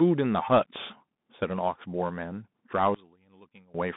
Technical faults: Bluetooth CVSD headset codec; one channel inverted

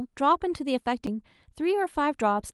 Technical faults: CD skip

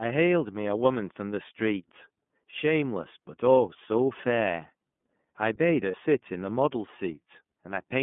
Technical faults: iLBC codec; lost iLBC frames

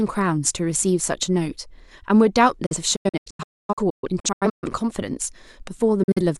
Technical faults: digital broadcast dropout

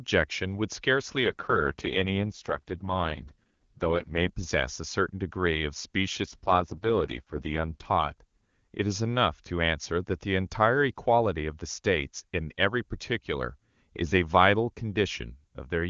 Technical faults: AMR rate drop

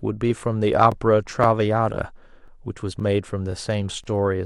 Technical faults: overlapping chunks

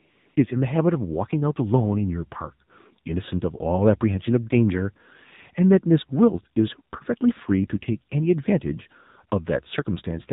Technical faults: AMR narrowband mobile codec; AMR comfort noise

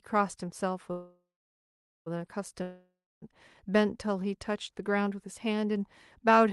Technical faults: call audio freeze; long network dropout

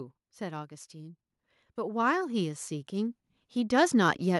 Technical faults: automatic gain rising

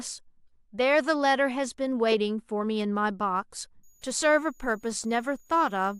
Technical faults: switching supply whistle

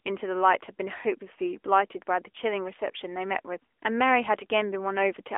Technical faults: AMR narrowband mobile codec

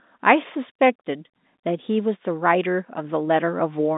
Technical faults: none

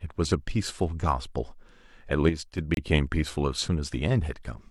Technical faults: sudden gain jump; gap between stream segments

